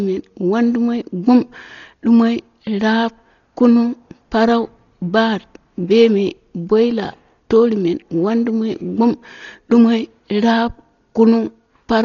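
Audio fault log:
Throughout: Dolby Digital compression, heavy. The speech is dull, with nothing above 7 kHz and a rough, fluttering noise around voiced sounds, likely from AC-3 coding near 32 kbps. The encoder narrows the band and leaves many lines without mantissa bits, which the decoder fills with dither noise.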